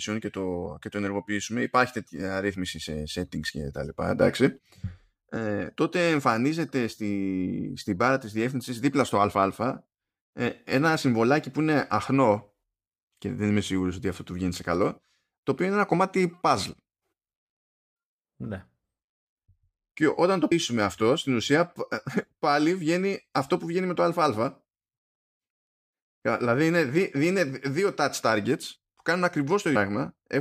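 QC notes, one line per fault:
0.65, 4.58, 20.51, 29.75 s: compressed frames skipped. The speech jumps ahead, before "και το ενεργοποιήσουμε υπάρχει", after "και τα λοιπά", and between "και όταν το" and "αυτό στην ουσία". About 70, 150, 200 and 200 ms vanish, which fits whole 23.2 ms frames. Overlapping frames smear each join into a brief blip.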